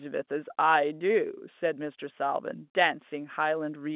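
No faults can be heard in the speech, which carries the narrow, telephone-band character of mu-law G.711 coding at 8,000 samples a second, with nothing above 4 kHz and only the faint, level-following quantisation noise that this format always adds.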